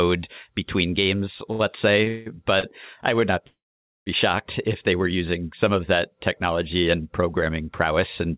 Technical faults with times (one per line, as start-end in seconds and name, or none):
1.52-1.61 short stall from a late packet
2.04-2.08 short stall from a late packet
2.08-2.28 call audio freeze
2.60-2.65 short stall from a late packet
3.47-4.08 call audio freeze